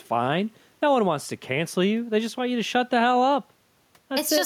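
Gain pumping runs throughout this speech clip. The gain swings by around 5 dB under loud speech, likely from excessive mic gain feeding a fast limiter.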